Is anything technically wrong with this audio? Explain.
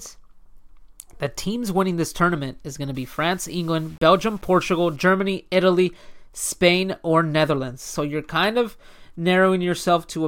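Yes. From 2.95 to 4.96 s, right after "tournament is going to", there is low bit depth without dither. The speech was likely cut down to very few levels, which fits 8-bit truncation, with no dither to break up the rounding error. That error tracks the speech, so it sounds grainy and gritty, with distortion roughly 30 dB below the signal.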